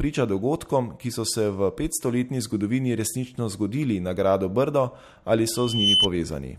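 Around 5.55 s a loudspeaker feedback squeal kicks in: the mic is catching its own speaker, and at 3 kHz the loop gain tips past one. The tone swells over roughly a third of a second, ending up a few dB above the speech, and cuts out at 6.08 s.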